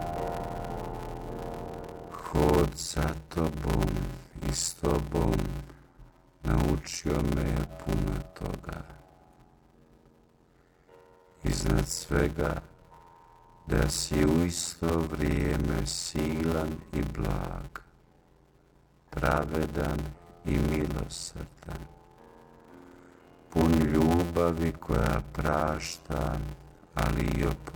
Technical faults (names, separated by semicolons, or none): block size mismatch (padded)